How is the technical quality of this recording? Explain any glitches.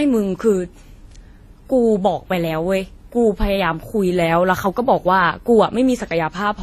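The speech has a layered, smeary lossy quality all the way through, with nothing above 14 kHz. That's likely transcoding between lossy codecs: the sound points to a WMA encode at around 48 kbit/s that was then re-encoded to AAC-LC at around 32 kbit/s. The second encoder wastes its small bit budget reproducing the first codec's artefacts and then adds its own. The 14 kHz ceiling from the chain stays, so you hear dull top end plus two overlapping flavours of swirly, grainy coding noise.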